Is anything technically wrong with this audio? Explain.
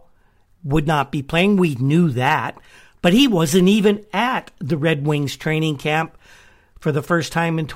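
Yes. Crackle breaks up the speech peaks at 1.38–1.41 s (after "not be"), 2.27–2.35 s and 3.07–3.9 s (before "at the"). This is hard clipping: overdriven by about 2 to 3 dB, the peaks are sliced flat, adding high harmonics.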